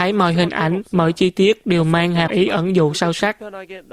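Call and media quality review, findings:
Damaged data in a compressed stream, 2.24–2.31 s (about 70 ms). Symptom: brief chirp, squawk, click or short hole breaking into the speech. Probable component: decoder input, from corrupted or lost bytes in the encoded stream. Mechanism: the decoder misreads the bad frames, loses frame sync, and emits garbage until it locks onto a valid frame header again.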